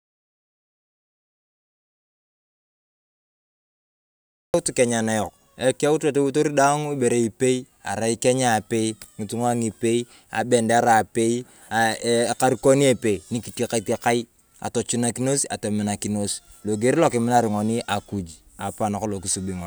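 From the very start to 4.54 s the clip is dead silent, no room tone at all, then speech enters mid-flow: an audio dropout to silence, likely from lost input.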